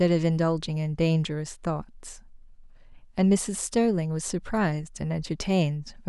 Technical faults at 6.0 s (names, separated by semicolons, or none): none